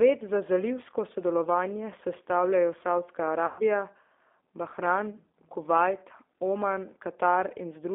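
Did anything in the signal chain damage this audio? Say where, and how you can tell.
Yes. At the codec stage, the whole clip carries the G.729 codec sound. Everything sits in a narrow phone band of about 250 Hz to 3.6 kHz, and the speech is plainly rough and synthetic, which fits an 8 kbit/s G.729A encode rebuilding each frame from a filter and a few pulses.

At the network stage, there's VoIP packet loss concealed by the speech codec from 3.46 to 3.62 s. The decoder stretches its last pitch and filter into a buzzy tone or coloured noise that fades, covering about 130 ms of missing audio. That fits roughly 13 lost frames, and the speech stays weak briefly afterward.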